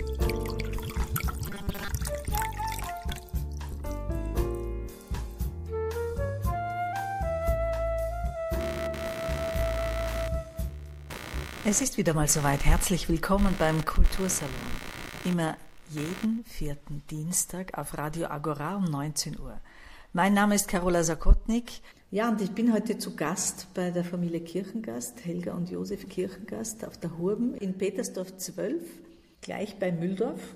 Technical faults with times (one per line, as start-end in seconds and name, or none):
1.47-1.88 robotic sound from repeated short buffers
8.60-16.39 computer activity noise